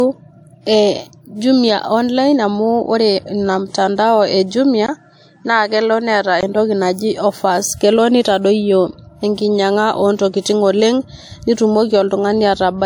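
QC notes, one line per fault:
Throughout: low-bitrate audio saved at a high bitrate. The file is high-rate MP3, but earlier coding artefacts remain. This likely fits an earlier 64 kbit/s WMA source re-encoded.
4.86–6.43 s: input switched to a poorer device. A 20 ms gap, then the band stops near 9.9 kHz with faint new noise. Likely a lesser microphone.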